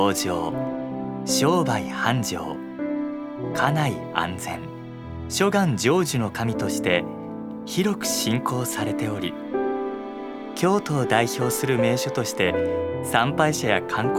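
No technical faults occur at any point, so there is nothing to describe in time order.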